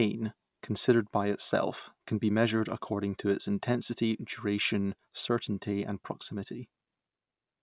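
Listening to this speech recording, nothing technical stood out as a problem.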